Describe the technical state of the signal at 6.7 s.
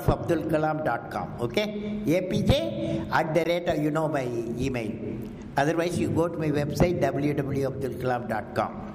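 At 6.7 s the signal is intact, with no audible fault at that moment.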